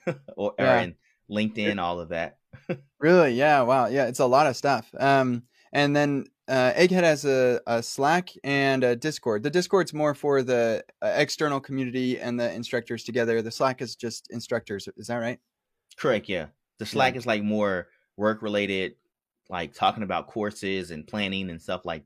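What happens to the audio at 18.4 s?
Nothing goes wrong at 18.4 s; the speech plays through that moment intact, with no dropout, click or distortion.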